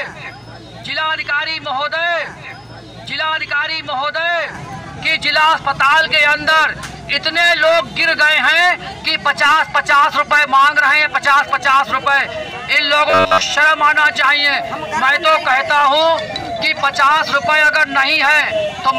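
From 13.10 to 13.42 s the audio turns into a rigid, metallic robotic buzz at 93.8 Hz from repeated short buffers, most of that span being a repeated roughly 10.7 ms slice that likely stood in for audio arriving late. Unlike a stutter or dropout, its buzz sits at one fixed rate.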